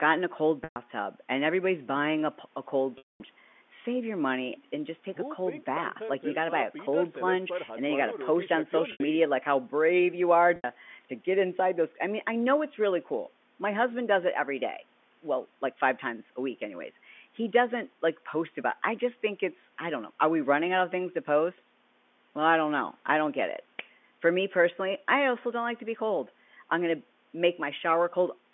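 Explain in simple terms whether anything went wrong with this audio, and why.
Packet loss with pitch repetition breaks the speech at 0.64 s, 2.98 s, 8.92 s and 10.56 s. Missing chunks were patched by repeating the last voice cycle: the short gaps sound like a brief buzzy hold, not a clean silent dropout, while the 0.22 s gap at 2.98 s fades to silence first.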